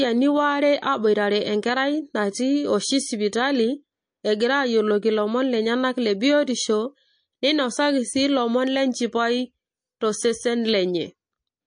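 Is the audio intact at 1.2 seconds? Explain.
No, MP3 compression damage is plainly audible at 1.2 seconds and throughout the speech clip. At a low bitrate, likely around 40 kbps, the encoder drops weak frequency lines frame to frame, giving a watery, swirly sound, metallic chirps on s sounds, and smeared attacks.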